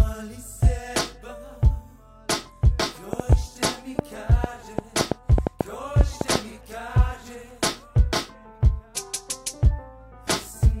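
From 3.13 to 6.36 s, a train of clicks ticks unevenly, about four a second and loud, likely from nearby interference injecting repeated pulses.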